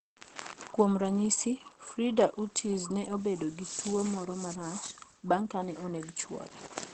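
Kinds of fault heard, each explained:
Opus compression: The speech is muffled and hoarse, with nothing above 8.6 kHz, likely from Opus in its speech (SILK) mode at a low bitrate near 16 kbps. Unlike a plain low-pass, the speech texture itself turns rough.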